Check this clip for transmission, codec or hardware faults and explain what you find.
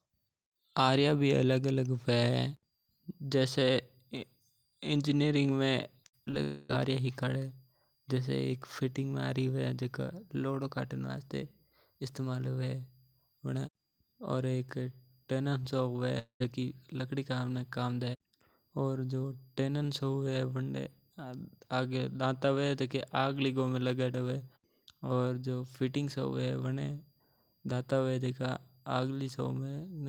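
Three transmission faults show up in this speech clip, all from network delivery.

From 6.03 to 6.35 s there is repeated packet loss (robotic sound). Audio arrived with four separate holes, the longest 57 ms, and each was patched by extending the preceding sound. About a third of that span is concealment, so the speech turns choppy.

At 6.43 to 6.71 s and at 16.19 to 16.42 s the sound smears into a continued buzz, and a chunk of speech is missing when it resumes. The first stretch stays filled throughout. The second fades to about 0.12 s of silence. The likely cause is a long network dropout in each case.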